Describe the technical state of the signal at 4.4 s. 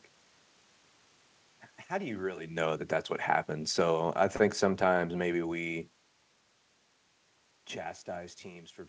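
Right at 4.4 s there's a short stall from a late packet, 4.36 to 4.42 s: the jitter buffer ran dry, so the last sound is stretched about 37 ms, held with a slight buzz or dip, and nothing is lost. Underneath, the automatic gain is falling from 3.78 to 5.54 s, just after "that that's what happened", easing the level down about 4 dB so the sound and its background sink together.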